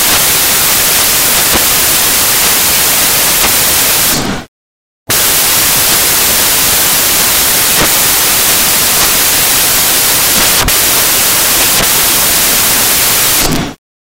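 Samples built from the wrong bytes run through the whole clip: misassembled bytes turn the rapidly changing low bits into each value's large part, producing loud, harsh broadband noise throughout.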